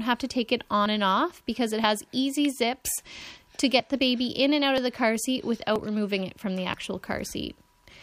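Small skips at 0.86, 1.84, 2.82, 4.78, 5.76 and 6.74 s each drop a tiny slice of sound and join the edges directly. This is likely audio missing between 1.0 s chunks.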